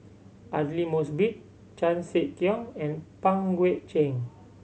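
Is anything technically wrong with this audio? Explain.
No, nothing technically wrong can be heard here.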